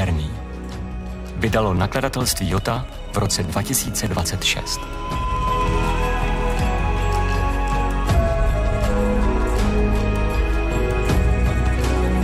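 From 1.77 to 5.74 s, periodic USB or driver dropouts occur: every 62 ms the bus or driver stalls and roughly 2 ms of audio is skipped, giving about seventy regular ticks. A spectrogram shows evenly spaced thin vertical broadband lines; the waveform, small jumps.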